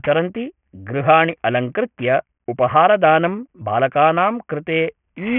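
Aliasing runs through the whole clip. The speech band stops hard at 3 kHz, which points to the audio having been taken down to a 6 kHz sample rate without a proper filter first. Energy that sat above 3 kHz did not vanish. It folded back below the edge at false, unrelated pitches. Those folded tones sit only moderately under the speech. Sibilants come out gritty and metallic.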